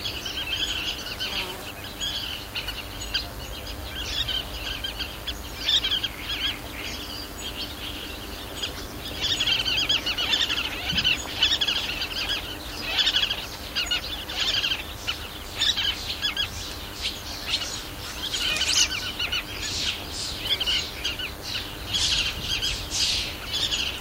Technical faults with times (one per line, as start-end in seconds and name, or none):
0.00-24.00 DECT cordless phone buzz